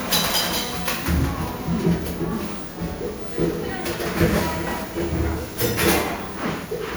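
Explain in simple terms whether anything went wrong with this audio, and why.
The audio was most likely saved as MP3 over and over, about seven times, with each copy made from the previous one. This is called generation loss. Every save throws away some detail in slightly different places, and the damage piles up. Across the whole clip, from start to finish, the sound is swirly, smeared and hollow, and sudden sounds lose their sharp edges.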